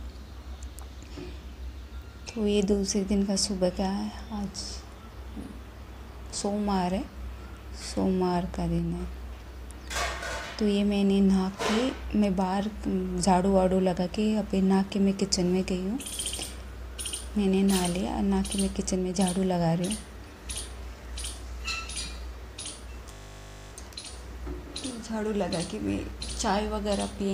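From 23.12 to 23.72 s a steady 50 Hz buzz replaces the sound: a system hang loop, where one 20 ms slice of the output buffer replays about 30 times while the system stalls.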